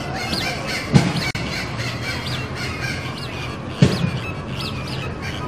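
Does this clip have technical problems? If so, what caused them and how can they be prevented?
Yes. There is a gap at a join of encoded pieces from 1.31 to 1.35 s. The sound drops out for a gap of about 42 ms, then resumes exactly where it left off. The edges are smeared by the codec, so the fully silent part is shorter. The audio was encoded as separate pieces and then joined. Each encoder run left its start-up delay and the padding of its final frame in place, and these became the gap. To prevent it, encode the material as one continuous stream, or trim each piece's encoder delay and padding before joining.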